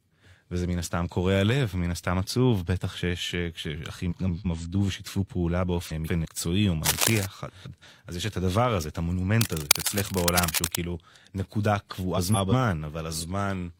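Frames out of order first shows up at 4.11–4.46 s and 5.87–6.25 s. Two neighbouring 171 ms blocks play swapped, giving a garbled flutter. Cable scratch noise comes in at 6.85–7.26 s as rough rustling about as loud as the speech, likely from a worn cable or connector being moved. The swaps return at 7.48–7.84 s, more scratching follows at 9.41–10.77 s, and a last swap lands at 12.17–12.52 s.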